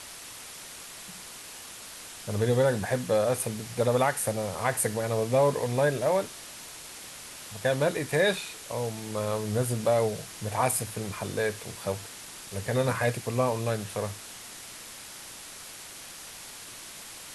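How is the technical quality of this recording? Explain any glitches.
The technical quality is poor because of low bit depth with dither across the whole speech recording. The signal is held at only 5 bits, with random dither added before rounding. Instead of distorting, the rounding error becomes a steady, even white hiss sitting only about 15 dB below the speech.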